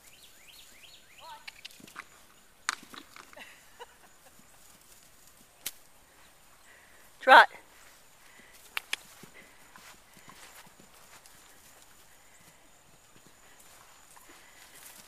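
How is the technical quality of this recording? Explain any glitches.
No technical glitches can be heard anywhere in this recording.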